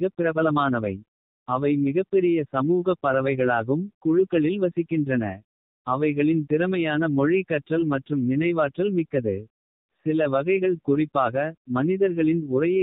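Speech running throughout through an AMR narrowband mobile codec: nothing above 4 kHz survives, and the plainly buzzy, synthetic timbre fits a low mode of around 7.4 kbps.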